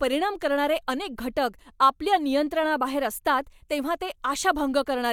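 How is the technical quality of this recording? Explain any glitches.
No audible glitches or faults.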